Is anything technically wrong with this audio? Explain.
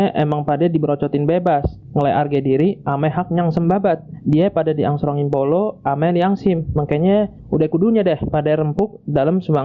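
Yes. Throughout, the level pumps, pulling down by around 10 dB under each loud sound: gain pumping, likely from excessive input gain with a fast limiter clamping down. The top end stops near 8 kHz, as expected from the call path.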